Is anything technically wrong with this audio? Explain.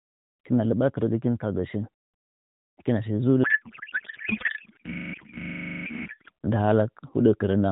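Yes. From 3.44 s to 6.31 s, just after "kiwa shi", there is a codec payload misread. The speech rides on AMR narrowband coding, whose light band-limited character suggests roughly the 12.2 kbps mode. In this span the packets were packed in octet-aligned form but unpacked as bandwidth-efficient, so every field lands on the wrong bits. The decoder then synthesises from nonsense parameters, and the speech gives way to garbled noise and warble that barely tracks it.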